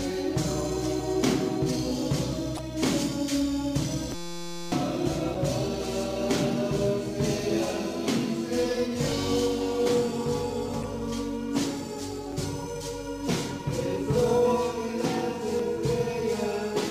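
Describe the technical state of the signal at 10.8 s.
At 10.80 to 10.85 s the compressed stream carries damaged data: a short run of bytes in the encoded file is wrong, so the decoder cannot read those frames properly, loses its place in the bitstream and has to hunt for the next valid frame header before normal decoding resumes. For roughly 40 ms the output becomes a brief synthetic chirp or squawk, a blip that sits outside the character of the surrounding audio.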